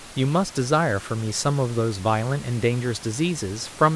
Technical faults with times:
none

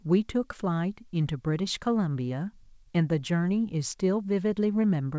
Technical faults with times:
none

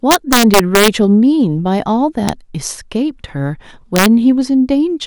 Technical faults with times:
0.11-0.88 integer overflow
2.29 integer overflow
3.96-4.06 integer overflow

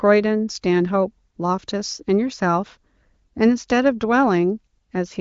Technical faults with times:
none

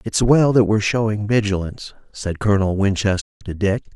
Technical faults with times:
3.19-3.43 digital broadcast dropout

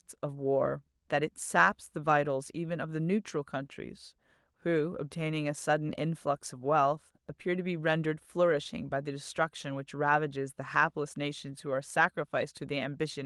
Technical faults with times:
none

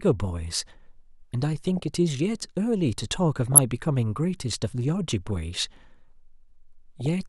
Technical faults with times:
1.67-1.88 DAB burbling
3.52-3.60 DAB burbling
5.26-5.36 DAB burbling
7.00-7.06 DAB burbling

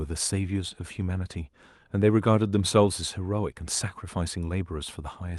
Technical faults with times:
none

